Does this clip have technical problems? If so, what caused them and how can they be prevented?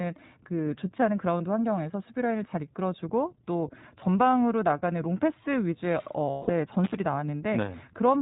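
Yes, there are three kinds of fault in this speech clip.

iLBC codec, throughout: the whole clip has the narrowband, slightly rough and synthetic quality of the iLBC codec, with nothing above 4 kHz. The damage is plainly audible, and the sound fits the 15.2 kbps mode with 20 ms frames. Each frame's excitation is coded on its own, and the narrowband coding cuts away the upper band and leaves a thin, rough edge on the speech. To prevent it, use a wideband codec such as Opus where both ends support it.

Lost iLBC frames, at 1.38 to 1.42 s and 6.30 to 6.51 s: the first gap lasts about 20 ms and fits a single lost frame. The second lasts about 180 ms, long enough for roughly nine consecutive frames. In both, the decoder fills the hole by repeating the last pitch cycle mixed with noise. The long one becomes a held, buzzy vowel that fades before clean speech returns almost at once. To prevent it, improve network reliability and add forward error correction or a larger jitter buffer.

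Intermittent contact, at 6.84 to 6.94 s: here the signal drops out for about 70 ms, with crackle at the edges of the gap and faint hiss while the line is open. A loose cable or plug briefly broke the connection and then remade it. To prevent it, reseat or replace the cable and connectors and secure them against movement.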